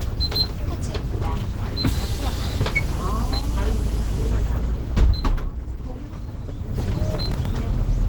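A recording of everyday sound carries a grainy, hoarse roughness from start to finish, with detail smeared into noise even though the top of the spectrum still reaches about 20.1 kHz. This is likely Opus compression at a low bitrate, around 16 kbps, where the encoder has fallen back to its hybrid mode, rebuilding bands from coarse energy and filler noise rather than the true detail. From 7.12 to 7.46 s a gritty burst of crackle tears across the sound. This is processor overload crackle: the processor repeatedly misses its deadlines for short buffers of a few milliseconds each, about ten in a row. Each miss replays a fragment of old audio with hard edges, and the run of those edges is what stacks up into the tearing texture.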